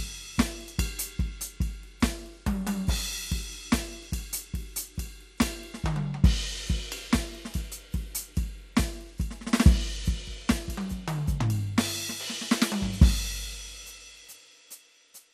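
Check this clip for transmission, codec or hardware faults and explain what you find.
One codec fault runs throughout the music: damage typical of MP2 compression, plainly audible, with nothing above 15.8 kHz. The likely cause is MPEG Layer II starving its 32 sub-bands of bits, which fits a rate near 80 kbps. Upper bands drop out and flicker, leaving a dull, gurgling graininess. A plain low-pass filter would sound dull but clean, without that granular churn.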